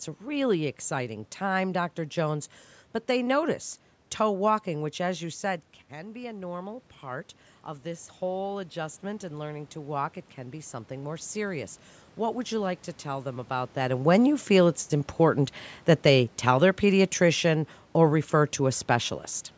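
After "which as you said", automatic gain rising lifts voice and room noise by about 9 dB from 5.97 to 13.53 s. The waveform envelope and the spectrogram noise floor climb together.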